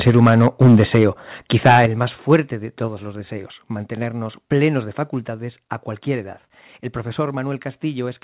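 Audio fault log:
0.06–1.04 s, 1.51–1.86 s, 2.32–2.36 s: microphone overload. Peaks run about 5, 10 and 2 dB past the limit, the last just after "el más". Flattened tops crackle harshly. Likely cause: input gain set too high.
0.1 s, 1.86 s, 2.88 s, 5.25 s: microphone volume stepped down. Level drops abruptly, about 8 dB before "el más" and about 3 dB elsewhere. Likely cause: the call software cutting input gain after clipping.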